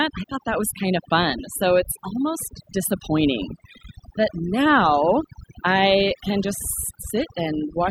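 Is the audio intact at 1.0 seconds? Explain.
No. At 1.0 seconds the speech is marked by overdone noise removal, which runs through the whole clip. The noise reduction is set too strong. It turns individual frequency bands far down or off whenever they fall near its estimate of the noise. The background drops and breaks up into twinkling specks.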